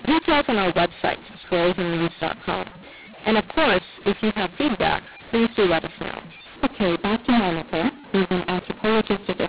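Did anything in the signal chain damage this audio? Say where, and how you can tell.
Yes. The damage happens at the codec stage, in decoding, and it lasts the whole clip. This is a mu-law and A-law mix-up. The speech was coded as G.711 mu-law, with nothing above 4 kHz, as telephone audio should be. It was then decoded as A-law. The two laws map the same 8-bit codes to different levels. So loudness is scrambled and the speech turns harsh and distorted. The quietest samples jump well above silence, so pauses fill with noise.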